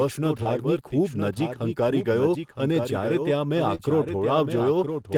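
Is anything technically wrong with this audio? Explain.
Yes, there are two faults. Throughout the clip, the speech is heard twice: a clean second copy trails about a second behind, roughly 5 dB quieter, with no reverberant tail. This doubled audio track likely comes from a second capture path or a misaligned edit layering two copies.

The speech also smears briefly at 0.43–0.47 s and again at 3.75–3.81 s. These are short concealed packet losses, about 20 ms and 40 ms of audio missing. The decoder stretched the preceding sound across each gap before blending back into the real signal.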